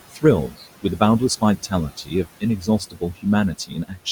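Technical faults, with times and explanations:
Throughout: noise suppressor artifacts. The steady room noise, about 16 dB below the speech, is pushed down by about 17 dB between words and swells back under them. On a spectrogram the noise floor appears as blotchy, flickering patches.
0.48–0.64 s, 1.41–1.73 s, 1.90–2.43 s, 2.60–3.25 s and 3.58–4.07 s: speech cut by the noise suppressor. The suppressor treated softer speech as noise and lowered it by about 10 to 15 dB, up to roughly a third of a second per span, so it sounds swallowed. On a waveform these appear as sudden envelope dips.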